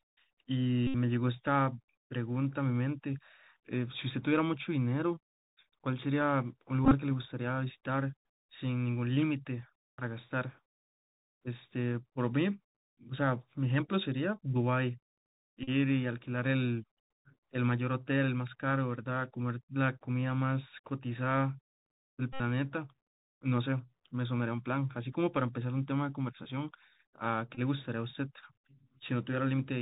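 The whole recording has passed through a Bluetooth CVSD headset codec, the narrowband link in which each sample is a single up-or-down bit with an adapting step size, which fits a 64 kbps CVSD stream. The damage is plainly audible. Nothing survives above 4 kHz, so the speech sounds boxed in. A grainy hiss sits beneath it, s sounds come out scratchy, and loud, bright moments distort where the step size cannot keep pace.

On top of that, the Bluetooth headset packet was repeated at six points, each time because voice packets between headset and phone were lost and the same decoded bits were replayed in their place. The first comes at 0.87 to 0.94 s. At 6.85 to 6.94 s the losses are scattered, with the longest unbroken stretch about 30 ms. The rest fall at 9.97 to 10.01 s, 15.63 to 15.69 s, 22.33 to 22.41 s and 27.55 to 27.60 s. In each, the replay every 3.75 ms turns the speech into a short, steady buzz near 267 Hz, lasting from roughly 20 to 70 ms, until clean packets resume.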